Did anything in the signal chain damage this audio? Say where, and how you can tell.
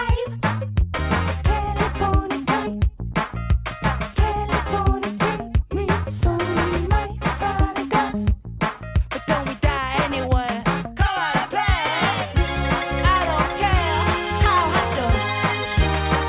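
No, nothing along the chain from capture to playback audibly marks this audio.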